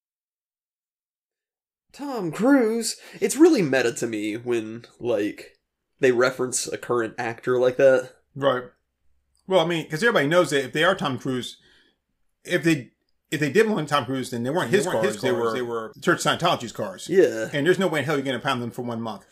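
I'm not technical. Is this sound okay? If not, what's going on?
No. From 14.59 to 15.93 seconds, just after "then they", there is a doubled audio track: the speech plays twice at once, with a second copy trailing about a third of a second behind and a little quieter than the original. The echo has no natural fade or room sound, and it switches on and off abruptly. This is likely caused by the same recording being picked up again through a slower route, or by an edit that left two out-of-step copies overlapping.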